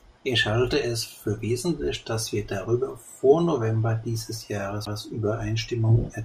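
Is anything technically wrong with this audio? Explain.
Yes, there's one fault. At 4.85 s there's a CD skip: the laser jumped tracks, so the speech briefly mutes with a tick, then carries on from a different spot on the disc.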